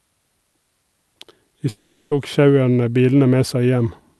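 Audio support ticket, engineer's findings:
Gap at 1.69–2.14 s, about 0.45 s. Last sound stretched into a fading buzz, no clean silence. Likely a long network dropout; concealment filled the gap. Lost audio never returns. Audio resumes at "tok sjauerne". Opus path, top near 12 kHz.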